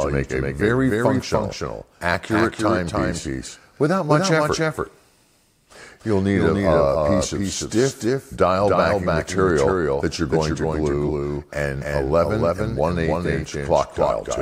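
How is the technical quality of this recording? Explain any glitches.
The whole recording carries a doubled audio track: a full-band second copy, roughly 5 dB quieter, trails the original by about a third of a second, with no decay or room colour. Likely, the same audio was captured twice, once through a slower path.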